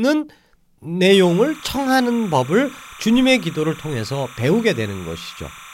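From 1.13 s to the end, timecode bleed chirps behind the speech: linear timecode at 30 frames per second leaking in, warbling around 1 and 2 kHz, roughly 20 dB down.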